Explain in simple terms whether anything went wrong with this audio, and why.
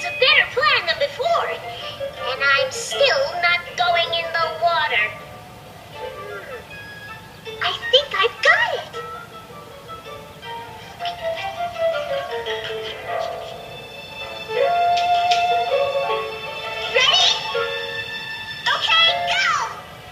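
Nothing went wrong; no faults can be heard here.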